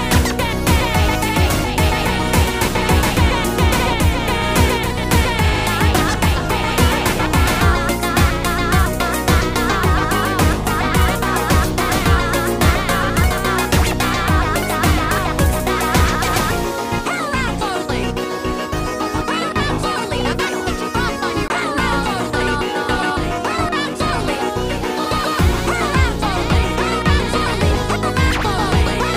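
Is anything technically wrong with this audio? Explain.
Yes, there is one fault. From 21.48 to 21.50 s the sound drops into a block of digital silence lasting 20 ms. A span of samples went silent, which points to the output buffer not being filled in time. The signal stops and resumes with no fade, heard as a short hole. On a waveform it shows as a flat line at zero. A spectrogram shows a thin empty gap.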